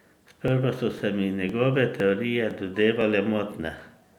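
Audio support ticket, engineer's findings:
Overlapping chunks: short click/stutter at 0.48, 0.99, 1.49, 2.00, 2.51, 3.01, 3.52 s, a regular 0.5 s grid. First lands just before "so se mi", second just before "se mi", third just after "so se mi". Probable component: chunked processing/transport stage. Each 0.5 s chunk starts about 6.5 ms before the previous ends, so that sliver plays twice. Differs from dropout/underrun: audio is repeated, not missing, and spacing is strictly periodic.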